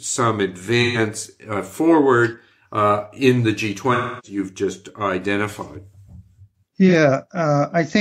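AAC frame loss with concealment breaks the speech three times. From 0.82 to 0.98 s, about 128 ms of audio is missing, which fits three lost frames. The decoder fills the gap from the last good spectrum, so the sound turns smeared and noisy. The longest patch runs from 3.93 to 4.38 s, about 299 ms, with the same rebuilt, phasey texture. A brief glitch follows at 6.88 to 6.93 s, fitting one lost frame.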